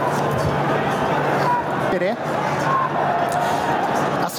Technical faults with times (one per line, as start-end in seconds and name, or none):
0.00-4.39 gain pumping